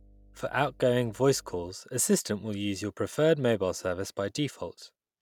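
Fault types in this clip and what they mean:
Mains hum: a steady low 50 Hz drone, well below the level of the speech, runs under the opening from 0 to 1.71 s and then stops. A ground loop or nearby transformer coupling the power line into the signal path causes this tone.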